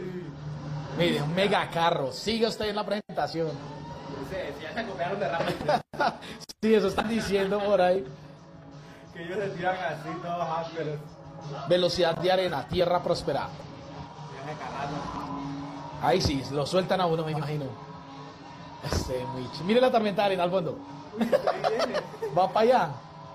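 At 15.13 to 15.23 s and 17.32 to 17.42 s, frames out of order swap two adjacent 46.4 ms blocks, giving a garbled flutter; unlike a dropout, no time goes missing.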